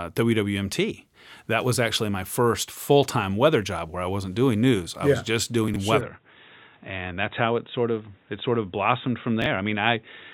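At 5.68 s, just after "I yeah was just", there is chunks out of order lasting to 5.76 s. A 20 ms piece of audio plays three chunks late, after the material that should follow it, so the order is scrambled and three hard joins appear. Unlike a dropout, nothing is missing. The sound is all there but briefly jumbled, which gives a garbled stutter rather than a gap.

From 6.01 s to the end, the sound changes in a way that points to an input switched to a poorer device, likely a different microphone or a headset call profile. Nothing above 3.8 kHz comes through, so the audio turns dull and boxy. A new background noise sits roughly 40 dB below the signal, with no silence at the switch and the level about the same. The new noise floor and the lasting change of tone set this apart from a simple low-pass filter.

At 9.42 to 9.46 s, chunks out of order occurs again. This time a single 20 ms chunk arrives one chunk late and is swapped with its neighbour, making a shorter jumbled moment within the narrowed sound.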